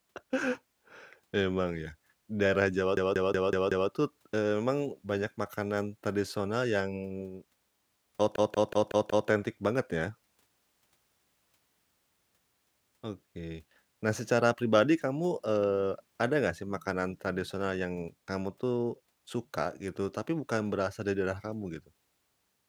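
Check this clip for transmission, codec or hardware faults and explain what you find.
Two system hang loop faults appear in this speech, from 2.97 to 3.90 s and from 8.36 to 9.29 s. In each, the driver stalled while the hardware kept replaying one buffer. A 186 ms slice repeats five times, fitting an 8192-sample buffer. It gives a machine-gun stutter at about 5.4 Hz.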